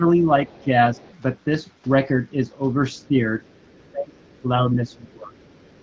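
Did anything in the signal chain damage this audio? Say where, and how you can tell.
Yes. In the call's echo-control stage, speech suppressed in double talk shows as level dips: a shallow one of about 5 dB, roughly 0.2 s in total, between 0.0 and 0.97 s, then deeper cuts of up to about 25 dB, about a second in total, between 3.08 and 5.31 s. These are likely the canceller ducking both talkers at once. Because the dips track the second voice, they aren't packet loss.

Also in the echo-control stage, the other side's voice is leaking through as a faint second voice, about 30 dB below the talker from 0.51 to 1.14 s and about 35 dB below from 2.95 s to the end. This is likely residual loudspeaker echo the canceller didn't remove. It overlaps the suppression, which points to echo rather than room background.

On the network link, AMR bit errors hit from 4.55 to 4.61 s, a span that points to about two corrupted 20 ms frames at a few percent bit error rate. 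The voice keeps its pitch and level but turns briefly hoarse and gargly. There's no silence or smoothed concealment, which sets it apart from lost frames.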